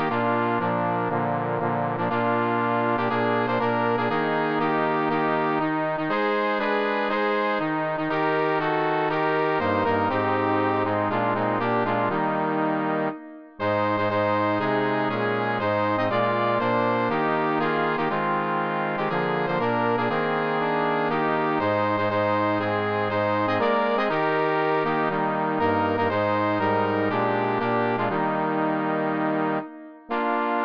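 No technical faults are audible anywhere in the recording.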